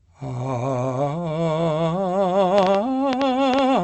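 From 1.05 to 2.14 s the music shows repeated stalls (stutter): the jitter buffer ran dry nine times, each gap at most 13 ms and bridged by continuing the last sound. Around 85 ms were filled in total with nothing lost, so the passage drags and hiccups.

From 2.58 s to the end, a train of clicks sits over the music at an irregular pace of about 6.4 per second, peaking roughly 20 dB above it. The steady, repeated pulse shape most likely comes from electrical interference or a faulty connection or power supply.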